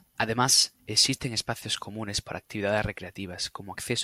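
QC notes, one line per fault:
1.16–1.18 s, corrupt frame decoded: a couple of consecutive compressed frames arrived with flipped bits, and the decoder played them as if they were valid. Misread gains and codes put energy at frequencies the speech never had, so the error comes out as a short, quiet chirp, squeak, blip or burst of noise of about 26 ms, peaking at only about -45 dBFS, right before "espacios comunes para actividades". It stops when the decoder reaches the next intact frame.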